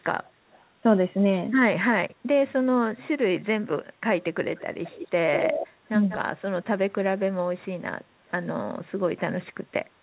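Speech over what sounds like a narrowband G.711 call with nothing above 4 kHz, and there's echo leak: delayed copies trail the talker by about 228 ms at 0.24 and 0.53 s, then about 193 ms at 4.58, 4.84, 5.36 and 6.09 s, growing from barely audible to nearly as loud as the speech at 5.36 s before easing back, likely a loudspeaker echo the canceller didn't fully remove. Right after, from 6.18 to 6.33 s, the talker drops out sharply while the far side plays on the loudspeaker, which sounds like speech suppressed in double talk, the canceller clamping down on both signals at once.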